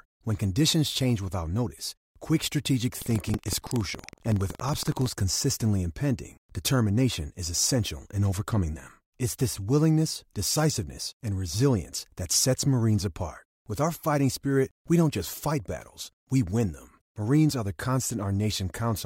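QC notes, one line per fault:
2.97–5.08 s, buffer tearing: after "without notice quick strategic", a rattling buzz at 21.5 Hz, which fits a 2048-sample buffer, runs until "consistently impending determination is". A small slice of each period replays audio about a fifth of a second old, hard-joined, with no silent gaps as in dropouts.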